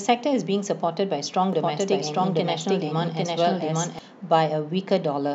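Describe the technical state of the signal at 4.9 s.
At 4.9 s the signal is intact, with the speech running cleanly and no audible fault at that moment.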